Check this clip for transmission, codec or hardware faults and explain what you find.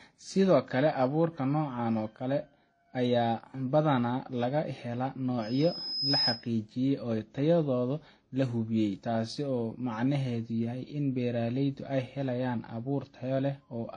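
Two faults are audible: a codec problem across the whole speech recording and one feedback event.

Transcoding between lossy codecs, throughout: nothing reaches above 9.9 kHz, and mixed artefacts are layered together, likely from successive AAC-type and WMA encodings, each re-encoding the previous damage.

Loudspeaker feedback squeal, 5.41 to 6.49 s: the microphone re-amplifies its own loudspeaker output at 5.1 kHz, so a pure tone swells in about 0.7 s to roughly 5 dB above the speech.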